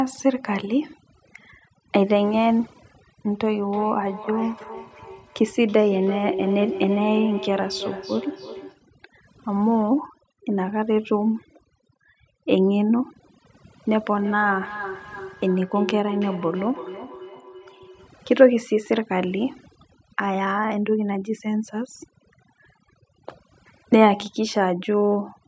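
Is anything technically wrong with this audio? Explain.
Yes, two things. Throughout there's overdone noise removal: the suppressor cuts bands near its noise estimate too hard, so the background drops and breaks up into twinkly specks. From 3.27 to 8.86 s and again from 14.04 to 18.15 s there's feedback echo between two devices. One device replays the other's microphone, which picks it up again, so repeats arrive roughly every third of a second at about 10 dB and about 12 dB below the speech, each thinner and more ringing. The call's microphone processing is also audible in the missing lowest bass and nothing above 8 kHz.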